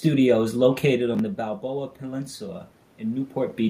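Right after "is located on the", at 1.61 s, automatic gain rising kicks in: the input dropped about 13 dB, so voice and room noise swell together to the end.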